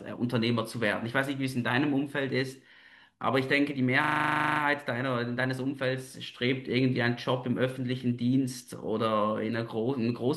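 From 4.04 to 4.6 s, a system hang loop repeats one 40 ms slice of speech 14 times, producing a 25 Hz buzz while the playback buffer cycles frozen.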